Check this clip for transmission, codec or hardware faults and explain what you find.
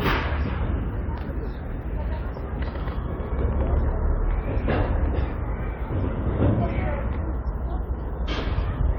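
Nothing in the clip points to a transmission, codec or hardware fault. The sound holds together throughout with no disturbance attributable to the signal chain.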